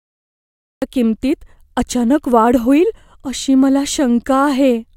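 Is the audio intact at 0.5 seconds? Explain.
No. At 0.5 s you're inside a cut-off start: the capture kicked in late, so from 0.0 to 0.82 s there's just digital silence, and at 0.82 s the speech jumps in partway through a sound with no natural attack or fade-in.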